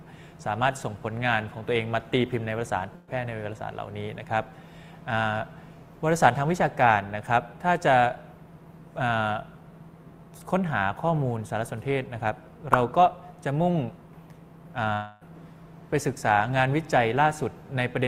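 At 2.95 s, a burst of packet loss cuts in until 3.09 s. About 120 ms of audio never reaches the receiver, which covers the hole by extending the last sound for roughly 118 ms and fading it out. You hear a brief held buzz or hiss dying away before the sound jumps ahead. On a spectrogram the frequency bands run flat and dim across that stretch, and the waveform shows repeating cycles shrinking toward the restart.

From 14.93 to 15.23 s comes a longer break, likely a long network dropout. About 280 ms is missing, and the receiver fills nearly all of it, about 277 ms, by stretching the final sound into a fading buzz or hiss with no true silence. The audio then resumes past the lost portion with an abrupt join. A spectrogram shows smeared, unchanging bands tapering off over nearly a third of a second, and the waveform shows a decaying repetitive pattern before the sudden return.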